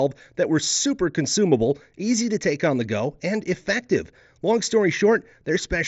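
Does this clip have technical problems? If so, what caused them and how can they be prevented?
No, there's nothing wrong here, just speech coming over a Bluetooth headset link that tops out around 7.7 kHz, as that kind of connection does.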